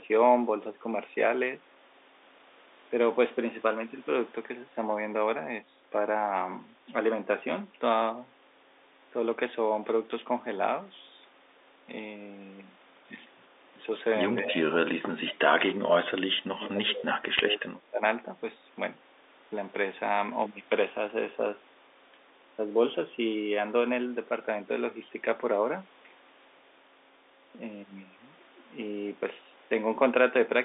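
From 14.44 to 15.42 s the talker's speech sinks, at its deepest by about 30 dB, and for roughly three quarters of a second it turns thin and patchy. It dips again more gently, by about 15 dB, for a brief moment at 15.70 to 15.86 s. Then from 16.56 to 18.02 s about a second of it breaks up, with drops near 25 dB. This is speech suppressed in double talk, likely from an echo canceller that could not tell the local talker from loudspeaker echo while both ends spoke and so attenuated everything.

Inside that last stretch, at 17.39 s, the line takes a brief hit. These are bit errors on a digital phone line. A few flipped bits in the A-law samples jump single sample values. The error rate is very low, which fits isolated errors rather than crackle. The band-limited G.711 telephone sound around it stays steady.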